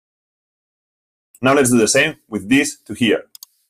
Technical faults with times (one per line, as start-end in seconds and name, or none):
0.00-3.70 noise suppressor applied to music or sounds